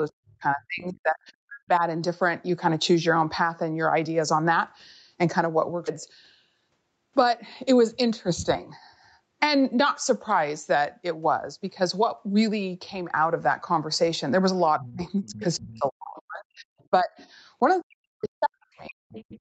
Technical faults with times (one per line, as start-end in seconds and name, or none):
0.06-1.82 speech suppressed in double talk
5.87-5.89 skip ahead
7.19-8.12 jitter buffer speed-up
14.78-17.10 speech suppressed in double talk
14.85-15.78 other side's voice leaking through
16.78-16.84 other side's voice leaking through
17.16-17.27 other side's voice leaking through
17.59-19.05 speech suppressed in double talk
19.09-19.39 other side's voice leaking through